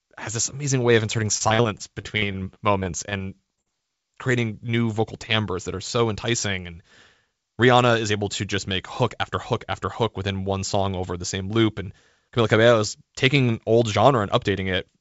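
Between 1.38 and 3.68 s of this speech clip, the call's packets keep arriving lost or late, producing repeated packet loss (robotic sound). The receiver bridges each gap by stretching the last received audio, and the holes come in a dense run, the longest about 47 ms, with roughly a sixth of that stretch synthesised. The result is choppy speech with missing pieces, set against the G.722 path's ceiling of 8 kHz.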